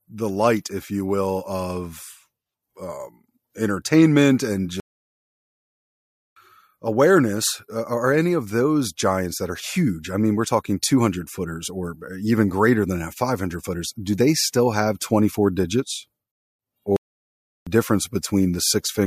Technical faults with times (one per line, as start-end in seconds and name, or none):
4.80-6.36 playback stall
16.96-17.67 playback stall